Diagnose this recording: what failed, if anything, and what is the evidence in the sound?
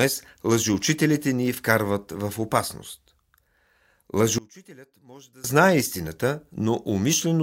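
From 4.38 to 5.44 s the speech drops by about 26 dB to a faint residue, recovering before "знае истината". The likely cause is one channel inverted in the wiring, cancelling the centred voice in mono. A dropout would leave silence, not this faint leftover.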